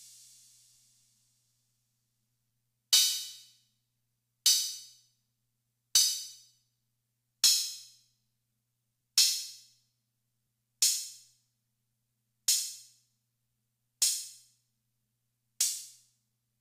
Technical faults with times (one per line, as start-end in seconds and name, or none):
none